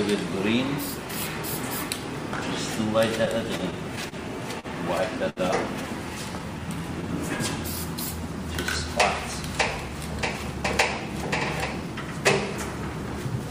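From 3.25 to 4.66 s there's stutter from repeated stalls: the jitter buffer kept running dry, so the receiver held the last sound through seven gaps, 121 ms in total, the longest 39 ms.

At 5.29 to 5.39 s a single late packet causes a short stall, with the sound stretched for 68 ms before picking up where it left off. Nothing's lost, just held.

Then from 9.48 to 11.96 s a jitter buffer speed-up trims around a tenth of a second in small pitch-period chunks, running the audio at 104% speed with pitch unchanged.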